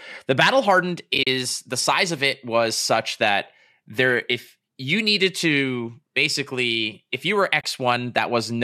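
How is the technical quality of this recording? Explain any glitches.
The recording has two dropouts caused by AAC frame loss with muting. A light graininess, likely from low-delay AAC coding, is also audible.

From 1.15 to 1.27 s, between "battle hardened" and "the size of it", lost frames were silenced, about 60 ms in all, with the longest gap around 40 ms. At 7.61 s, after "basically if you were", a further 30 ms drops out. Overlapping windows fade each hole in and out, so they sound soft-edged.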